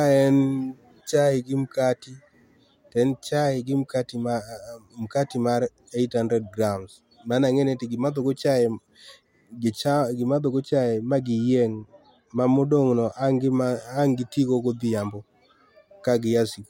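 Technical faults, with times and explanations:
10.27 to 13.52 s, de-emphasis applied wrongly: an unneeded treble cut slopes the highs down about 10 dB at 10 kHz, muffling the speech; the spectrogram's upper band visibly darkens.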